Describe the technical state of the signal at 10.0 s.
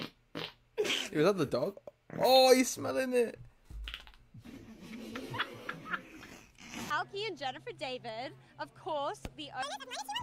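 At 10.0 s the audio is read two samples at a time (double speed), from 9.63 s to the end at 10.23 s. Sample pairs are taken as single frames, so playback runs at 2x speed and 12 semitones higher. The spectrogram shows harmonics shifted up an octave, and the waveform looks time-compressed.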